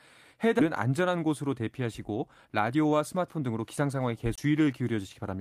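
This speech clip has three separate faults. At 0.59 to 0.61 s there is a skip ahead: a stretch of audio was discarded in transit or by an overflowing jitter buffer while later audio was already queued, so playback leaps forward with no fill at all. Roughly a second of speech is simply gone, and the two sides of the cut are butted together almost seamlessly, cutting the delay by about the same amount.

From 2.31 to 4.74 s a jitter buffer speed-up is at work. The receiver was holding more audio than its target, so it repeatedly trimmed out short pieces a pitch period or so long to drain the excess, removing around 0.3 s in total. The result is speech running at about 111% of normal speed while the pitch stays put, which makes the delivery sound rushed across that whole span.

Inside that stretch, at 4.36 to 4.38 s, comes a CD skip. The pickup's laser was jolted onto a different turn of the disc spiral, and the player muted for about 20 ms before resuming from another position. 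It is heard as a brief tick, then an abrupt jump in the speech by a whole number of disc revolutions.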